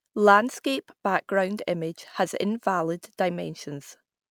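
Speech with sample clock jitter throughout: timing error of roughly a microsecond adds a faint hiss, some 45 dB down, that grows on loud, bright sounds and disappears in pauses.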